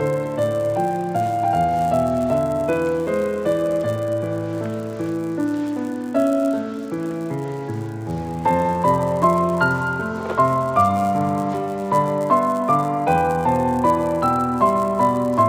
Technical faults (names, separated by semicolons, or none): resampler restarted on every block